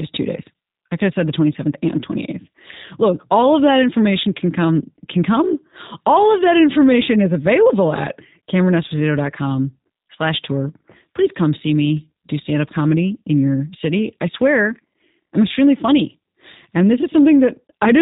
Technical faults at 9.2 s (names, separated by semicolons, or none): G.729 codec